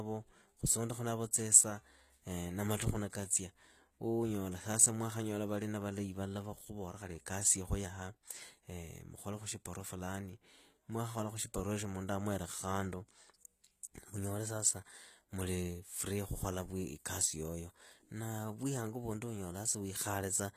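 Speech throughout with plainly audible HE-AAC compression damage: gritty, lispy sibilants, likely from band replication at a very low bitrate. A spectrogram shows blurred, copied-looking treble and nothing above 14.9 kHz.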